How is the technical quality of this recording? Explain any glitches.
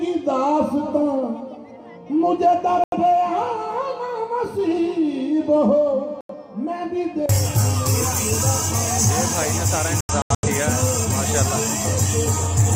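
The recording has three digital broadcast dropouts, at 2.84 to 2.97 s, 6.21 to 6.34 s, and 10.0 to 10.5 s. Each time, the receiver lost the signal or rejected corrupted frames and muted until clean data returned. The first two are single holes of about 85 ms, which fits two lost frames. The third is a cluster of short holes totalling 256 ms across about 430 ms, none longer than 85 ms. The sound cuts to silence and resumes, with that stretch of programme gone.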